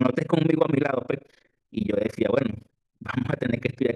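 From start to finish, the speech carries overlap-add ripple: the signal was split into windowed frames and rebuilt with an overlap whose gains do not add up evenly, so the level dips deeply, by about 60 dB, once per frame, around 30 times a second. It sounds like a harsh, robotic flutter chopping every syllable. A waveform shows a regular comb of near-silent notches, and a spectrogram shows evenly spaced vertical gaps across all frequencies.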